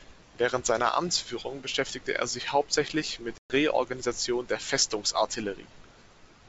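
At 3.38 s, right after "er sich hauptsächlich mit", a run of several packets goes missing on this G.722 call carried at 64 kbit/s, and about 120 ms of audio drops to hard-edged silence until 3.53 s. This is packet loss on an ADPCM call. When the speech returns, the decoder's predictor and step size no longer match the sender's, so the return comes with brief, slight distortion that settles within tens of milliseconds. A plain dropout would resume cleanly.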